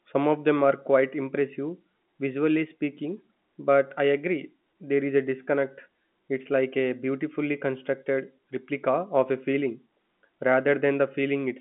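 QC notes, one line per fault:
Nothing stood out on listening to this speech, which carries the narrow, band-limited sound of an ordinary G.711 telephone line.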